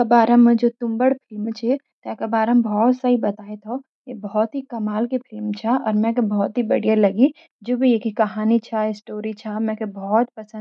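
Nothing here trips the ear as a technical fault; the speech just runs along with no glitch, dropout or break anywhere in it.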